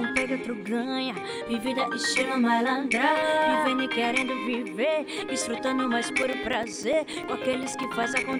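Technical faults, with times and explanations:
6.23–8.34 s, periodic USB or driver dropouts: a short gap of a few milliseconds falls every 0.1 s, about twenty in all, filled with silence as the bus or driver stalls. The metronomic spacing, not random placement, separates this from packet loss.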